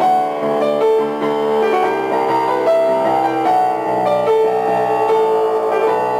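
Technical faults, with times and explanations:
Throughout, crude rate conversion: nearest-sample picking, which fits a 48 kHz to 44.1 kHz change, leaves inharmonic fizz roughly 30 dB down, tracking loud and high sound.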